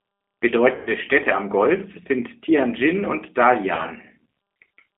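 Throughout, the speech passes through the G.729 codec at 8 kbit/s, which rebuilds each frame from a vocal tract filter, a pitch predictor and a few pulses. The band is held to about 300 Hz to 3.4 kHz, and the speech sounds plainly rough, thin and synthetic.

From 0.75 to 0.94 s, VoIP packet loss is concealed by the speech codec. About 120 ms of audio is missing, which fits four lost packets. The decoder extends its last pitch and filter at falling gain, so the speech turns into a fading buzzy tone or coloured noise and stays weak as packets resume. At 3.75 to 3.84 s, a shorter gap of about 30 ms, which points to a single lost packet, brings a briefer fade and a weak or distorted recovery.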